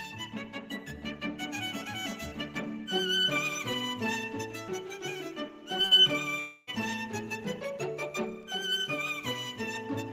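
At 6.39 s the sound gives way to a smeared, buzzy continuation of the last moment that fades until about 6.70 s, when the audio resumes with roughly 280 ms simply missing. That's likely a long network dropout, with the receiver stretching the old audio over the gap.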